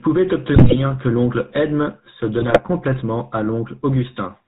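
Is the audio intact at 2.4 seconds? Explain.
No. GSM bit errors run from 2.4 to 2.59 s, just before "complètement à": corrupted filter, pitch and gain values distort the spectrum and level frame by frame, producing squawks and gargling. Beneath this, the GSM full-rate codec is plainly audible throughout, with pulse-driven excitation and no content above 4 kHz giving the speech a buzzy, gravelly roughness.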